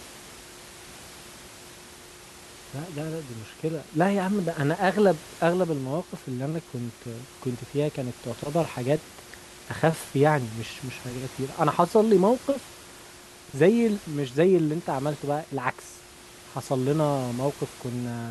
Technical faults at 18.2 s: none

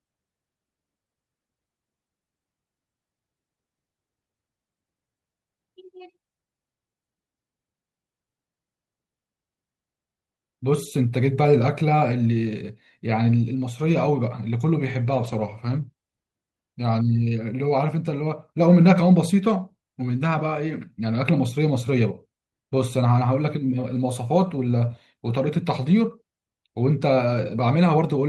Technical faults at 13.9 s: lost packet rebuilt from error correction

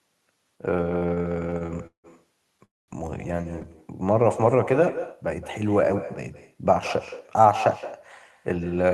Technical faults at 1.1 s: echo with no canceller; repeated stalls (stutter)

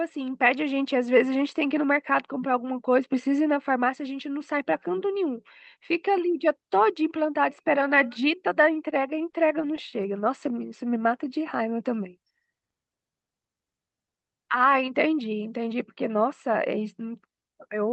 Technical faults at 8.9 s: repeated stalls (stutter)

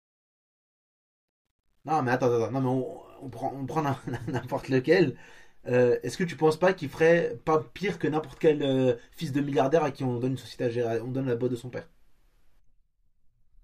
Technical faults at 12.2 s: none

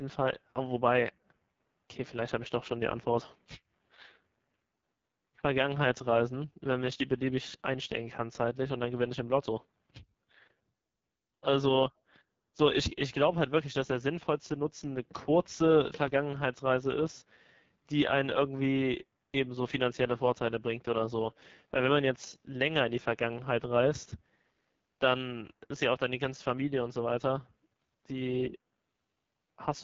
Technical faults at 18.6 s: AMR wideband (HD Voice) codec

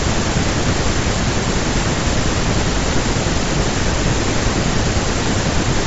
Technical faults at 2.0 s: none

